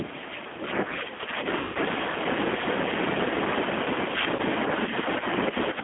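The whole recording passes through a G.729 codec at 8 kbit/s, which rebuilds speech from a filter and pitch model on a line confined to roughly 200 Hz to 3.5 kHz. The damage is plainly audible: a thin, slightly rough, synthetic edge to the speech throughout.

From the start to 1.46 s, an echo canceller likely mistook the talker for loudspeaker echo while both sides spoke, producing speech suppressed in double talk. For about a second in total the speech dips and thins, at worst by about 10 dB.

At 1.59 to 1.78 s, 160 ms of audio never arrived, which fits a run of lost 10 ms frames. This is VoIP packet loss concealed by the speech codec: the decoder stretches its last pitch and filter into a buzzy, fading tone, and the speech stays weakened briefly afterwards.

At 4.36 to 4.41 s, a shorter 30 ms loss is concealed the same way, giving a brief buzzy smear rather than a gap.

From 5.5 s to the end, the same double-talk suppression returns. 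For around a fifth of a second the speech drops by up to about 10 dB and loses its brightness.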